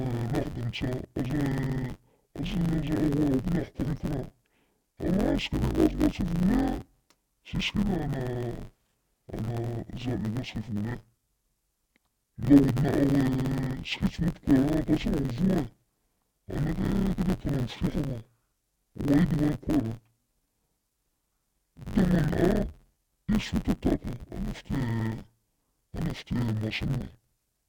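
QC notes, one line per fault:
Throughout: interleaved audio read as planar. The speech sounds dull and robotic, with a steady buzz near 94 Hz. Left and right samples alternate within each block, but each block is split in half, with the first half taken as left and the second as right. Each half plays at half speed, yet the overall pace stays right. The blocks are about 10.7 ms long, which fits a 512-sample block. That is too short for a clear octave drop. The block boundaries repeat at 93.8 Hz and cause the buzz.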